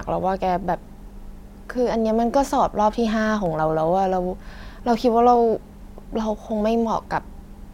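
A speech clip with regular clicks from about 1.56 s to 7.25 s, roughly every 1.9 s. This pattern is likely clock drift buffer slips. Two clocks disagree by around a hundred parts per million, so the buffer periodically drops or repeats a few samples.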